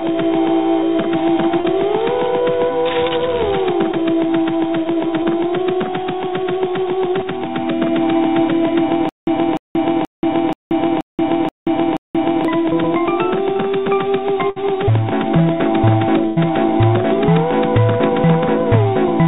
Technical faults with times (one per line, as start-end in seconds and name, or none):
1.60-1.66 short concealed packet loss
3.92-3.95 short concealed packet loss
5.23-5.27 short concealed packet loss
9.09-12.45 stutter with silent gaps
14.50-14.58 burst of packet loss
16.26-16.38 burst of packet loss